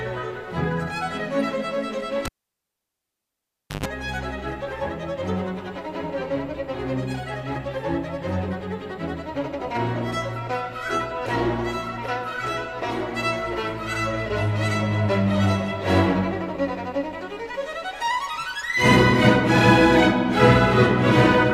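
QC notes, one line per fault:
2.25–3.86 s, cable pulled and plugged in: a pop, roughly 1.56 s of near silence, a 133 ms burst of 50 Hz mains buzz, then a second pop as sound returns. The live lead was yanked out, buzzed while only its tip made contact, then reseated.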